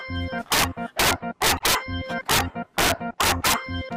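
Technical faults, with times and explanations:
0.52–0.64 s, 0.99–1.75 s, 2.30–2.41 s, 2.78–3.54 s: integer overflow. Loud peaks driven about 6 to 7 dB past full scale wrap to the opposite sign instead of limiting, giving harsh cracks sharper than clipping.
1.55–1.61 s: damaged data in a compressed stream. Corrupted frames desynchronise the decoder, which hunts for the next frame header. The fault sits inside the overflow run.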